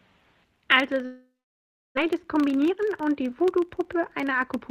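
A filter restarted on every block loses its state at each block boundary, so a small transient repeats throughout, heard as a 25 Hz buzz following the speech level. From 1.05 to 1.99 s a long network dropout is the likely cause: the last sound is stretched into a fading buzz, then about 670 ms of silence, with 600 ms of speech never returning. From 2.07 s to the end, a jitter buffer speed-up trims short pitch-period pieces, removing roughly 300 ms, so speech runs 11% faster at unchanged pitch and sounds hurried.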